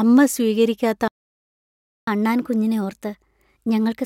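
Just after "അമ്മ സ്വീകരിക്കാത്ത", the speech cuts to silence from 1.08 to 2.08 s, about one second, a playback stall, likely from the player running dry or being blocked. From 2.08 s to the end the speech runs 1.1 times fast and roughly one and a half semitones higher, a catch-up at higher speed as the player plays through its backlog.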